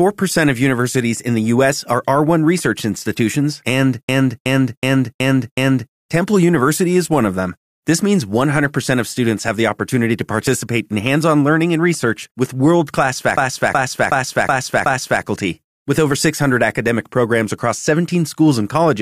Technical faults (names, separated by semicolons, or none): system hang loop; overlap between stream segments